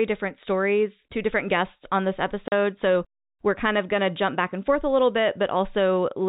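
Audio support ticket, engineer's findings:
Packet loss filled with silence at 2.48 to 2.52 s, just after "different guests on this". 40 ms dropout with hard edges; the length fits two lost 20 ms packets. Probable component: the jitter buffer or receiver, which inserts zeros instead of concealing the loss. Waveform: flat silent gap with abrupt vertical cuts. Spectrogram: blank vertical stripe across the G.711 band below 4 kHz.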